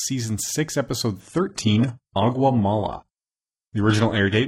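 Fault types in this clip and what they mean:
Adaptive stream at a lower bitrate: a slowing connection pushed the player onto a far leaner rendition from 1.2 s to the end. The sound switches abruptly, without a gap, to a dull, artefact-laden version with nothing above 11.5 kHz, which fits low-rate HE-AAC.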